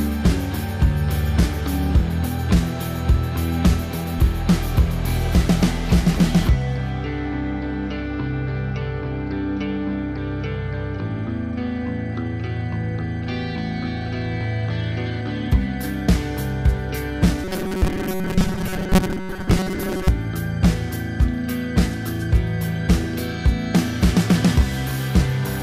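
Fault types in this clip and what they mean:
Robotic sound from repeated short buffers: from 17.44 to 20.08 s the sound turns into a rigid, metallic buzz at 188 Hz, likely because playback repeats a 5.3 ms chunk while new audio arrives late, replacing most of the real signal with copies.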